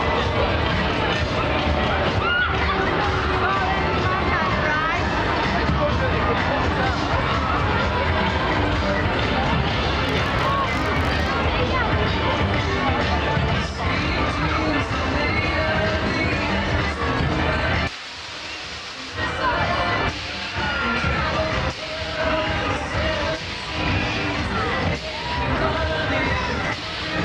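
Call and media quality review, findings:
Buzz at about 47 Hz riding the signal's level, 10.05–11.32 s. Filter restarted on every block, so each block starts from silence with a small transient, which fits a 1024-sample block size.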